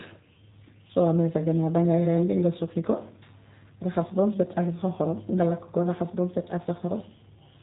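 G.729 codec damage runs through the whole clip, from the first second to the last. The speech has been rebuilt rather than stored: each 10 ms frame is modelled as a vocal tract filter driven by a pitch predictor and a few sparse pulses, which fits G.729A at 8 kbit/s. That model gives the voice its plainly audible rough, synthetic edge, and the band-limited coding leaves nothing above about 3.8 kHz, so sibilants sound dull.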